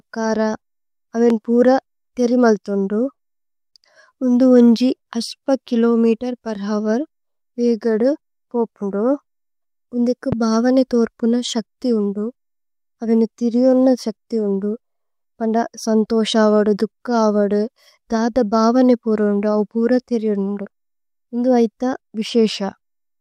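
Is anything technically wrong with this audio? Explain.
Yes, the speech carries two loud pops, at 1.30–1.33 s and 10.32–10.35 s. Each is a single sharp thump roughly 10 dB above the speech, likely from a sudden voltage pulse such as a switch or static discharge. Unlike a dropout, the speech continues unbroken beneath.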